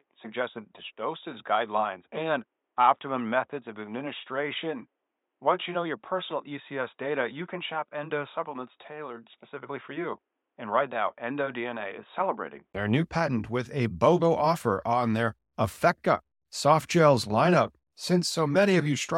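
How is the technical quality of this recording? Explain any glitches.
The recording is compromised for its first two-thirds. From 0.0 s to 12.75 s the speech is band-limited, with nothing above 3.8 kHz, so it sounds dull and boxy with faint added noise well below the speech. At 12.75 s there is a 20 ms gap, after which the full bandwidth returns at much the same level. This pattern is consistent with an input switched to a poorer device, likely a narrowband headset profile, before switching back.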